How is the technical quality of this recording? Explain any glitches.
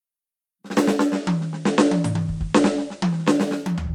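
The music has one glitch. From 0.95 to 3.54 s, digital radio blends to analogue FM over 336 ms. Hiss rises to roughly 35 dB below the signal, and level shifts about 1 dB.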